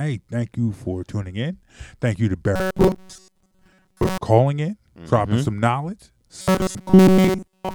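From 2.56 to 4.18 s and from 6.41 to 7.75 s, the speech becomes a metallic buzz pitched near 188 Hz, loosely following the words. This is robotic sound from repeated short buffers, likely from audio arriving too seldom so a roughly 5 ms slice kept looping.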